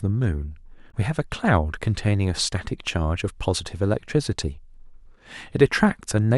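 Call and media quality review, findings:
Damaged data in compressed stream, 0.88–0.94 s: brief glitch in the speech, about 70 ms. Component: codec decode path. Corrupted or missing bytes in the compressed frames; decoder misreads them, loses frame sync and resynchronises at the next valid header.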